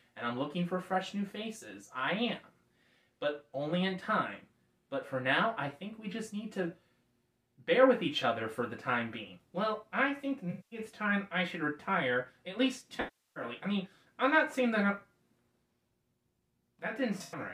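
AAC frame loss with concealment smears the audio at 10.50–10.79 s, 13.00–13.44 s and 17.18–17.40 s, where the last patch is scattered, its longest run about a tenth of a second. Rebuilt from the last good spectrum, these sound noisy or phasey, not hard silent like a plain dropout.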